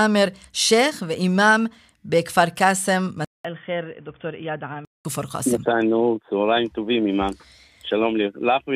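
From 3.25 to 5.05 s, after a 200 ms silent gap, the speech turns dull and boxy, roughly 10 dB quieter, over a faint new noise floor. This is likely an input switched to a poorer device. The spectrogram is empty above 3.5 kHz there, and the waveform visibly shrinks.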